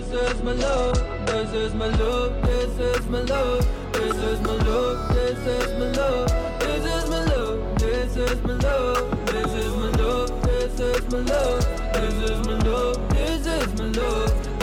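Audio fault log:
0.0 to 2.0 s, adaptive stream starting at a low bitrate: dull, smeared sound with nothing above 10.1 kHz, then a sudden, gapless lift, pointing to a low-bitrate AAC start before stepping up.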